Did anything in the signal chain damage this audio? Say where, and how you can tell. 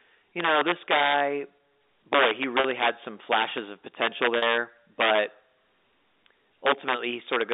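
Yes. Integer overflow at a gain or sample-format conversion stage produces violent cracks on loud passages at 0.40–1.20, 2.13–2.89, 3.32–3.58, 4.02–4.57, 5.01–5.18, 6.66–6.94 and 7.33–7.53 s, driven about 2 to 8 dB past full scale. On the waveform, peaks snap to the opposite rail instead of flattening. The spectrogram shows broadband vertical streaks.

Packet loss with pitch repetition in the network path causes 40 ms gaps at 2.60 and 4.38 s, which fits two 20 ms packets each. The receiver recycled the last pitch period, so the speech briefly holds on a buzzy tone. A spectrogram shows frozen, evenly repeated harmonics, and the waveform shows identical cycles, all inside the narrowband 300 Hz–3.7 kHz telephone band.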